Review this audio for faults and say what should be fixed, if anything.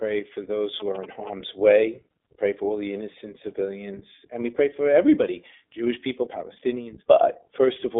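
The call path went through the iLBC codec, which codes each 20 ms frame's excitation independently over a line band of about 300 Hz to 3.6 kHz, consistent with its 15.2 kbps mode. Everything above 3.6 kHz and below 300 Hz is gone, so the speech sounds thin and boxy, and the frame-by-frame coding leaves a plainly audible rough, synthetic grain across the whole clip. To prevent this, carry the call on a wideband codec and reserve iLBC for links that cannot support one.

From 0.8 to 1.29 s, just after "for those", a nearby GSM phone was signalling to its network. It transmitted short groups of radio bursts, and the audio circuit rectified them into sound. What comes through is a galloping pattern of brief buzzes at about 217 Hz, sitting roughly 20 dB below the speech. To prevent this, keep mobile phones away from the microphone and its cabling, and use shielded, RF-filtered inputs.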